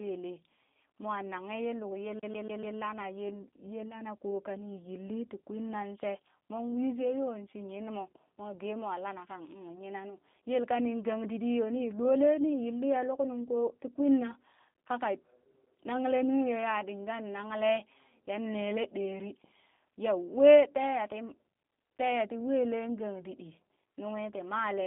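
Throughout, the speech sounds rough, faintly synthetic and cut off above 3.6 kHz: G.729 codec damage, consistent with an 8 kbit/s coder rebuilding speech from pulses.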